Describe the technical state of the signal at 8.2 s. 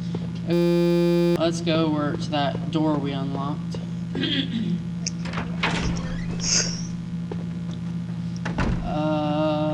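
At 8.2 s the signal is intact, with no dropouts, clicks, distortion or other faults to be heard.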